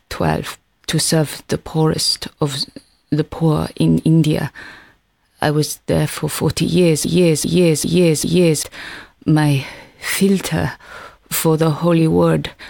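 Broken-record loop from 7.04 to 8.63 s: a 397 ms chunk of audio plays four times back to back, identical each pass, and whatever belonged in that stretch is gone. The player or stream most likely stalled and kept resending its last fragment.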